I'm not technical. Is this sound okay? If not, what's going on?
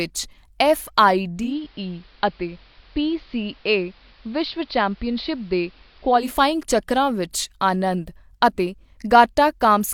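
No. From about 1.34 to 6.34 seconds you can hear digital radio blending to analogue. The radio lost its digital signal and smoothly switched to the older AM broadcast of the same station. The change takes about a fifth of a second each way. During that stretch the speech turns muffled. It also gets a little quieter, and a faint hiss sits underneath. Then the clearer digital sound returns.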